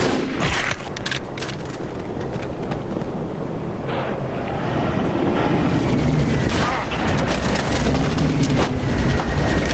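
Gain pumping runs through the whole clip: the gain swings by about 15 dB, likely from input gain set far too high with a fast limiter clamping it, while the call path limits the band to 8 kHz.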